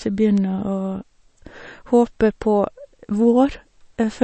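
A speech recording with plainly audible damage that sounds like MP3 compression throughout. Nothing is heard above about 8.3 kHz, where the encoder has cut the treble to save bits. The remaining detail sounds watery and swirly, because weak frequency components switch on and off from frame to frame. S sounds pick up a metallic chirp, and consonant attacks smear. This is likely a low-bitrate encode, and the damage fits something near 32 kbps. At 0.38 s there is a single sharp tick, a bit error spike. It is broadband and has nothing to do with the sound around it. A flipped bit makes the sample value jump by a power of two and snap back. The tick is very brief, which fits a fault spanning only a few samples.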